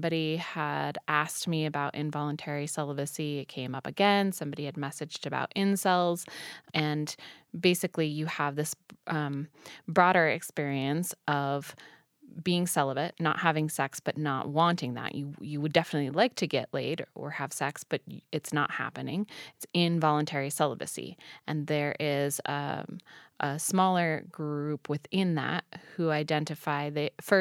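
Nothing goes wrong anywhere in this bit of speech, so there's really nothing here to point out.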